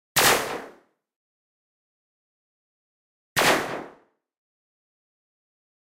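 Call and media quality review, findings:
De-emphasis applied wrongly, 2.49 s to end of clip. Sudden dull, muffled tone. Stray treble-cut filter, acting on audio with no pre-emphasis or applied twice. Smooth high-frequency rolloff, about 8 dB down at 10 kHz relative to 1 kHz. Spectrogram: upper band visibly dimmer from 2.49 s.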